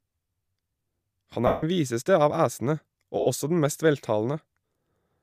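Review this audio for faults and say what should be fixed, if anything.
Lost LE Audio frames occur twice in this speech. From 1.47 to 1.63 s, just before "viseste av æsene", about 157.5 ms turns into a noisy smear. From 3.20 to 3.26 s, between "viseste av æsene" and "også den mest", a 60 ms gap does the same. The decoder replays the last spectrum with scrambled signs and fades it. Both gap lengths fit whole 7.5 ms frames. To prevent it, strengthen the Bluetooth link with shorter range, less interference or more retransmissions.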